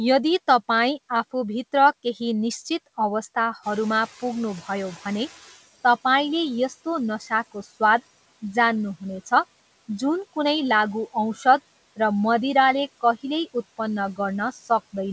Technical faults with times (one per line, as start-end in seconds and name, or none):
3.62-5.59 noise suppressor catching up
7.20-7.81 speech cut by the noise suppressor
11.34-11.45 speech cut by the noise suppressor
14.52-14.70 speech cut by the noise suppressor